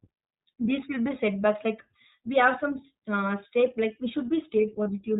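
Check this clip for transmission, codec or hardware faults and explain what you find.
Two faults are present: codec damage across the whole recording and one short dropout near the end.

Throughout, the speech sounds muffled and slightly rough and synthetic, with nothing above 4 kHz and plainly audible coding damage. This is the iLBC codec, a narrowband VoIP coder that codes each short frame independently. The sound fits its 15.2 kbps mode with 20 ms frames.

From 4.84 to 4.89 s, the speech briefly turns into a held, faintly buzzy sound before returning cleanly. This is a lost iLBC frame: about 20 ms of data went missing, and the decoder filled the gap by repeating the last pitch cycle mixed with noise.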